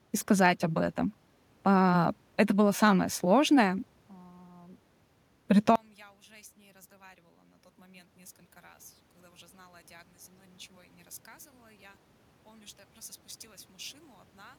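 A speech recording. At 5.76 s the sound collapses by about 29 dB and stays that low to the end. The likely cause is one channel inverted. Opposite polarity makes the shared content cancel when the two channels are summed to mono.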